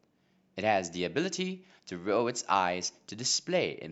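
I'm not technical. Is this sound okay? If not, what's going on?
Yes, nothing in this recording points to a technical problem at any moment.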